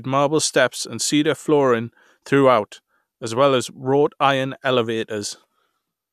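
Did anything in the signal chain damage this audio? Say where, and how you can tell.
No, nothing in the chain audibly damaged this audio.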